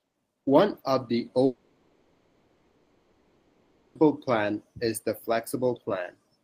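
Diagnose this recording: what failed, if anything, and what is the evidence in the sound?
After "of the" at 1.45 s, the speech turns into a fading buzz or hiss that settles into low steady noise until 3.97 s, when "plan is the" resumes with about 2.5 s missing. This points to a long network dropout, likely packet loss, with the receiver synthesising filler for the gap.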